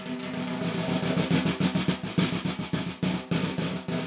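Nothing stood out on listening to this recording of everyday sounds, which comes across as having passed over a narrowband call path with no content above 4 kHz.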